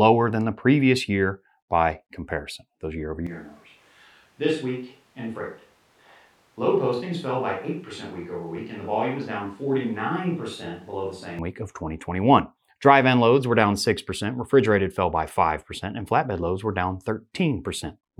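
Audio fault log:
3.27–11.39 s, switch to a distant microphone. After "comparison those year over" the speech abruptly turns roomy and hollow. Bass thins, level falls about 10 dB, and room noise rises. Close sound returns suddenly at "week of". The close microphone likely dropped out.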